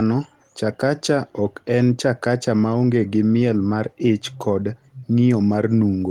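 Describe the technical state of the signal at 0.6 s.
At 0.6 s the speech signal is intact, with no audible fault at that moment.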